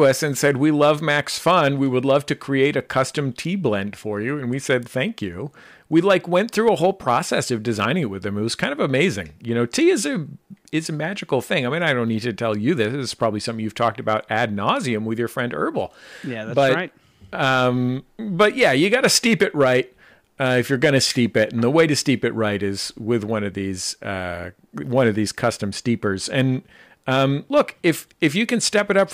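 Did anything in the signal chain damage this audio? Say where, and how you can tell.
Yes: hard clipping runs through the whole clip, at the converter or a gain stage ahead of it. Speech peaks are driven about 4 dB past full scale and sliced flat, so only a small fraction of samples clip. Each flat top adds high harmonics, heard as brief crackle on louder syllables.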